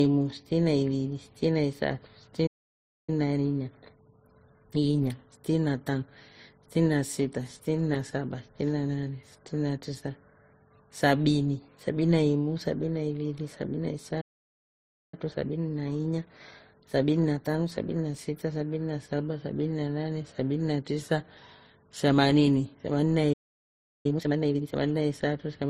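Throughout the speech, smeared, watery artefacts of two kinds overlap, likely from transcoding between lossy codecs, MP3 then Opus.

At 2.46 s the sound stops dead for about 0.61 s, a playback stall, likely the player running out of data. It shows as a flat line in the waveform and a blank vertical band in the spectrogram.

From 3.10 to 6.10 s comes time-compressed catch-up at 1.1 times speed. The speech is hurried at normal pitch, and the spectrogram shows compressed syllable spacing.

At 14.21 s a second stall cuts the sound for about 0.92 s. From 15.14 to 18.14 s catch-up runs at 1.15 times speed.

At 23.33 s a third stall lasts about 0.72 s. A brief, sharply rushed catch-up follows from 24.06 to 24.76 s at double speed, with syllables visibly crowded in the waveform.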